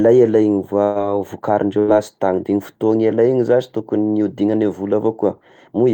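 At 0.83 s and 1.79 s, the last sound of the speech briefly stretches on and fades, then skips ahead: a burst of packet loss, dropping about 120 ms and 80 ms.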